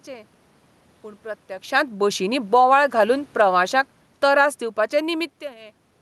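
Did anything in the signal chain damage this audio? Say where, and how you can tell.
Yes. Automatic gain falling in the call processing stage pulls the level down by about 6 dB between 2.39 and 5.43 s. What separates it from a talker moving back is that the room noise sinks along with the speech, and the drop is a slow, steady slide rather than a shift tied to distance. The gain control judged the input too loud or its background noise too strong, and eased its gain downward over those three seconds.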